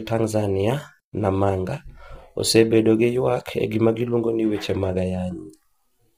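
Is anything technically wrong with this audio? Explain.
Yes. Throughout, the speech sounds rough and grainy, with noise between harmonics. Likely heavy low-delay AAC compression near 24 kbps. Its short frames smear pitch detail.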